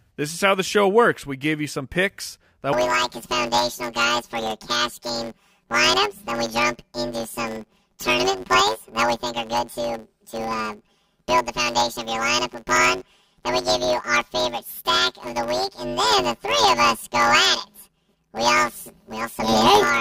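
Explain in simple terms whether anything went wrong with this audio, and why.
Planar audio read as interleaved, from 2.73 s to the end: 10 ms stereo blocks get scrambled, so the speech turns into a robotic buzz at 100 Hz.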